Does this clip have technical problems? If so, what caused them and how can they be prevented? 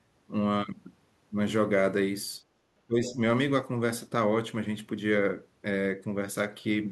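Yes, three related problems, all around the echo canceller. From 2.43 to 2.59 s the room sound ducks by about 14 dB for roughly 150 ms, then comes back: that's background gated by the echo canceller. While the far end was playing out of the loudspeaker, the canceller clamped the mic hard, and the ambience went with it. A gentler suppressor setting, or comfort noise to fill the gap, would keep the background steady.

From 2.87 to 3.19 s the speech itself sinks by something like 15 dB for about a third of a second, and it sounds pulled back rather than clean. This is most likely speech suppressed in double talk. Both ends were talking at once, and the canceller couldn't separate the local talker from the loudspeaker echo, so it turned everything down. Better double-talk detection, or a headset so there's no echo to fight, would prevent it.

From 3.09 to 3.13 s, inside that same stretch, a short scrap of a second voice pokes through, well below the main speech at roughly 15 dB down. 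That's the other side's voice leaking through. The likely cause is the far-end audio coming out of the loudspeaker and getting back into the mic, with the canceller failing to remove all of it. Headphones, or lower speaker volume with better mic placement, would keep the far end out of the pickup.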